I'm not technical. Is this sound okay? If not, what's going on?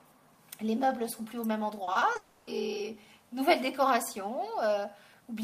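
No. There are two problems, one right after the other.

From 1.83 to 2.17 s there is repeated packet loss, which gives a robotic sound. Small pieces of the audio went missing in transit four times in that third of a second. Each gap was short, the longest about 40 ms. The player covered each hole by stretching out the sound just before it. About 29% of that stretch is patched, so it sounds choppy and mechanical.

Then, from 2.17 to 2.49 s, the sound smears into a stretched, fading continuation for about 300 ms. It never drops to silence, but nothing new comes through. The likely cause is a long network dropout, where the connection stopped delivering audio for a moment. The player filled the whole gap by extending the last sound. When the audio resumes at 2.49 s, that missing part is simply gone.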